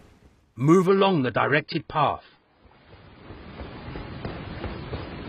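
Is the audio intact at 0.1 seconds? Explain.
Yes, at 0.1 seconds the audio is intact, with no dropout, click, distortion or other fault to be heard at that moment.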